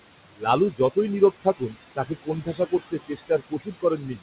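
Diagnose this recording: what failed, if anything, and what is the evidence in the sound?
The call-processing stage failed: the noise suppressor is classifying too much of the signal as steady noise and pulling those bands down by about 19 dB, frame by frame. The room noise, sitting about 11 dB under the speech, drops away in the gaps and swells back beneath the talking. The speech itself is band-limited at 4 kHz in the way a narrowband codec such as G.711 would leave it.

The same suppressor is also cutting speech it mistook for noise. Parts of the speech sink by about 18 to 21 dB at 0.32 to 0.47 s, 0.71 to 0.97 s, 1.31 to 1.76 s, and from 1.96 s through to the end. In the second and third spans only part of each stretch is affected, and softer consonants and word endings come out swallowed or faint.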